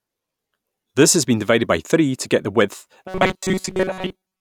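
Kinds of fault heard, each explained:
Robotic sound from repeated short buffers: right after "to get the width", from about 3.08 s to the end, the speech collapses into a stiff metallic buzz pitched at 188 Hz that still loosely tracks the words. The likely cause is audio arriving too slowly, so the playback side keeps looping the last tiny chunk, which fits a buffer of about 5 ms, while most of the real audio gets skipped over.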